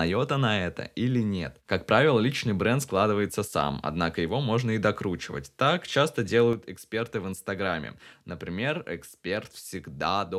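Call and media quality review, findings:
One channel drops out, 3.47–3.52 s (after "правило личный бренд складывается", before "однако его можно и") and 6.53 s to end. Level falls about 6 dB abruptly; waveform steps down, spectrogram uniformly dimmer. Likely lost stereo channel before mono downmix.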